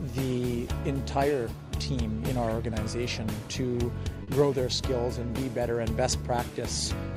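At 4.23 to 4.30 s, a short concealed packet loss occurs: about 40 ms of audio arrived too late for the decoder, so the receiver extended the preceding sound to cover the gap before rejoining the real signal, leaving a brief smeared or wobbly patch.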